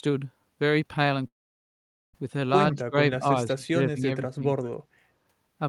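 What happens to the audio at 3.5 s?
Speech suppressed in double talk, from 3.47 to 4.45 s: the voice dips by up to around 20 dB, likely because an echo canceller mistook this side's talker, overlapping the far-end sound, for echo.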